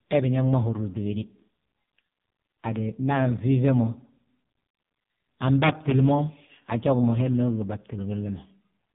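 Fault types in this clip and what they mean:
AMR narrowband mobile codec: throughout, nothing passes above about 3.8 kHz, and heavy low-bitrate coding, fitting roughly 5.15 kbps, leaves the speech buzzy, thin and synthetic.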